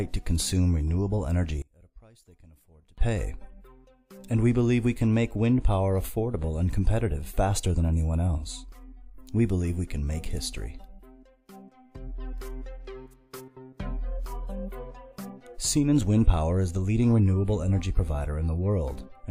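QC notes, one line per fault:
1.62–2.98 s, one channel inverted: in mono the centred content collapses by about 28 dB, leaving a faint residue. Likely reversed polarity on one side. Waveform shows a sharp amplitude dip, spectrogram thins.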